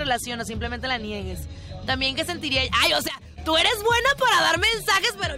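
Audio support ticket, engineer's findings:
Sudden gain jump, 3.08 s to 3.38 s. Level drops by about 12 dB in a single sample step, no fade. Background noise drops with the sound, so the change is in the digital gain stage, not the source. Level snaps back up at 3.38 s, also without a ramp. Likely cause: a gain setting or bit shift applied mid-stream without smoothing. Check the gain control path for missing ramping.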